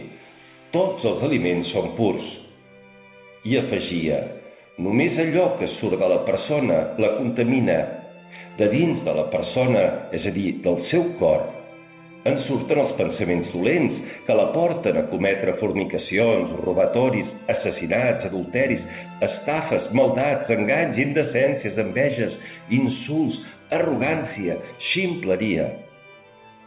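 Nothing goes wrong anywhere in this one; the sound simply carries the narrow, phone-like character of a call line using G.711 mu-law at 64 kbps, with nothing above 4 kHz.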